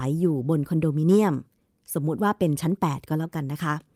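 Listening to this speech recording, nothing stood out as a technical problem at any point.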